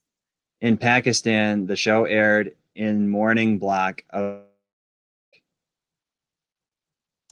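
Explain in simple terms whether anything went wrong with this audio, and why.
A long network dropout hits from 4.21 to 5.35 s, right after "aired in morning block". The speech breaks off, and a fading buzz stretches the last sound before dead silence takes over for about 0.76 s. The most likely cause is that audio packets stopped arriving for just over a second, so the player padded the gap itself. When the speech resumes, about 1.1 s of it is simply gone.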